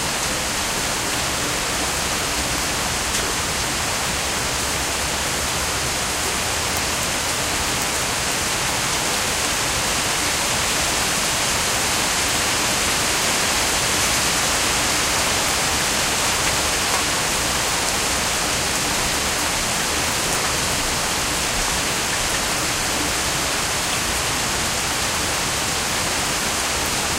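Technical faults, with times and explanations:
Nothing technical to flag here; the sound comes through without any faults worth pointing out.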